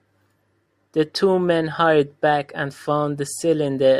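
From 0.11 s to 3.98 s, a soft, even rattle rides along with the speech: faint ticks about every 50 ms, roughly twenty a second, showing up most on the louder, sustained stretches and dropping out in the pauses. These are clock slip clicks, likely caused by two devices running on separate, unsynchronised clocks drifting apart by around 400 ppm, so that a single sample is dropped or repeated each time the difference adds up to a whole sample.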